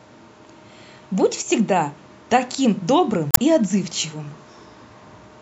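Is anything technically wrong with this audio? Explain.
Yes. From 3.31 to 3.39 s, about 80 ms, there is damaged data in a compressed stream. Corrupt bytes in the encoded speech make the decoder misread those frames, lose sync and hunt for the next valid frame header. The result is a brief chirp, squawk, click or short hole in the speech.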